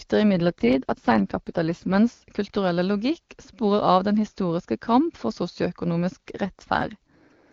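The radio link weakened twice, and each time the network pushed the AMR wideband codec into an AMR rate drop, trading speech bits for error protection. From 0.33 to 1.97 s, ending just before "kulturelle logikk", and again from 6.44 to 7.52 s, the speech turns rougher and more synthetic, consistent with a fall to about 8.85 kbit/s. The bandwidth holds and nothing drops out. Between the drops the speech sounds clean, as the top rate near 23.85 kbit/s would give.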